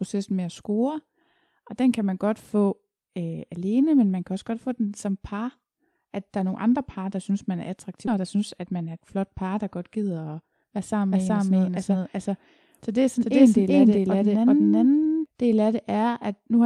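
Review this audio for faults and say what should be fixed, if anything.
Right after "der synes man er", at 8.07 to 8.09 s, the speech jumps forward with no gap, so roughly 0.7 s of speech is missing and the two sides butt together. This is a skip ahead: audio was dropped, either on the way or by the jitter buffer when it overflowed, while later speech was already queued. A larger buffer ceiling or gradual time-scaling instead of discarding would prevent it.

From 8.17 to 9.15 s, ending at "par der godt", the speech runs about 8% fast at unchanged pitch. Right after that phrase, from 10.01 to 10.95 s, it runs about 11% fast. Both sound hurried. This is jitter buffer speed-up: the buffer was overfull, so the receiver cut short pitch-period slices, around 100 ms in each stretch, to reduce delay. Smoother network delivery or a gentler buffer-drain policy would prevent it.

From 11.12 to 15.26 s, a second full-band copy of the speech trails about 400 ms behind at roughly equal loudness. 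It has no decay or room colour, and it switches on and off abruptly. This doubled audio track is likely caused by a second, slower capture path being mixed in alongside the direct one. Routing only a single capture path into the mix would prevent it.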